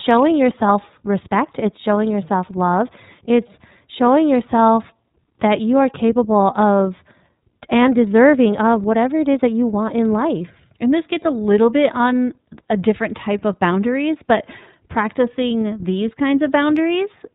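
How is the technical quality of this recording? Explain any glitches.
The recording is narrowband and audibly codec-coded throughout. From start to finish it carries iLBC codec damage. Each 30 ms block is coded on its own, so the speech turns rough and slightly synthetic and loses everything above 4 kHz, which fits the 13.33 kbps mode. A plain low-pass would only sound muffled, without this grainy texture.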